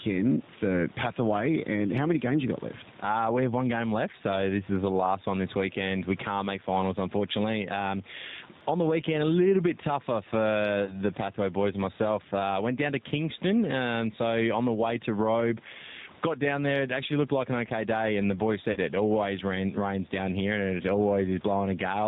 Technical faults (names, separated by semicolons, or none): gain pumping; G.729 codec; VoIP packet loss concealed by the speech codec